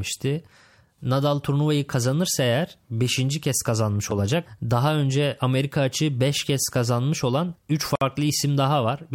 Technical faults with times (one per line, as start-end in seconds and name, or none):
7.95-8.01 gap at a join of encoded pieces